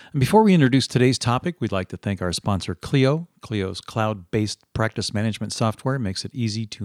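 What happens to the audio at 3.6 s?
Nothing goes wrong at 3.6 s; the speech there carries straight through without any dropout, glitch or other fault.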